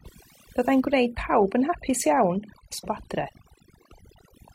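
Across the whole speech clip, overdone noise removal leaves the background at near silence speckled with twinkling artefacts. Suppression set too hard has switched off individual frequency bands near its noise estimate, taking quiet voice detail with them, unlike steady filtering, which dulls evenly without twinkles.

At 2.79 s the sound lurches forward abruptly with a small blip, the jump spanning about 2.79 to 2.85 s. This is likely a stream segment skipped, where the player lost one segment and resumed with the next. It is a clean jump ahead, not a stutter or a repeated fragment as in a buffer glitch.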